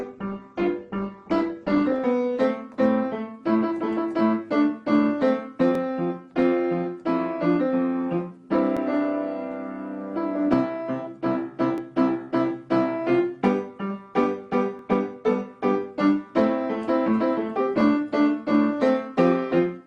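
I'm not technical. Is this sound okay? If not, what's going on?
No. For the first 2 seconds this is an adaptive stream starting at a low bitrate: the player began with a low-quality version to start quickly, so the sound is dull, missing its treble, with an artificial sheen. At 2.0 s it switches to the better version, abruptly but without a gap.

There are also overlapping chunks: the audio was handled in 3-second pieces, and each piece starts about 13 milliseconds before the previous one ends. That sliver plays twice, giving a click or stutter at 2.74, 5.75, 8.77, 11.78, 14.79 and 17.81 s.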